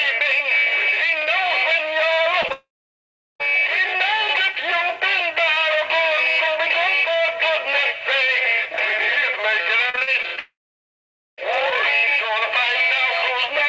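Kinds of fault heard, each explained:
Short concealed packet loss: A couple of tiny holes, around 2.42 to 2.46 s and 2.48 to 2.52 s, each about 20 ms of audio that never arrived in time. The receiver papered over them by carrying the last sound forward, so you get a quick smear just before the bigger gap.
Long network dropout: The sound cuts out for long stretches from 2.52 to 3.42 s and again from 10.39 to 11.40 s, most likely because the network stopped delivering audio. A short carried-on tail fades into roughly 0.74 s and 0.86 s of silence, then the sound resumes further along with that chunk simply gone.
Repeated packet loss (robotic sound): Between 9.90 and 10.39 s there are seven separate holes, the longest 43 ms, and about 31% of that stretch is patched. Each patch extends the last sound before the next gap hits, so it comes out choppy with bits missing, leading straight into the second dropout.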